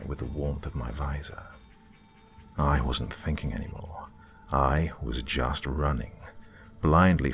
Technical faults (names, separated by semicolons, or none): none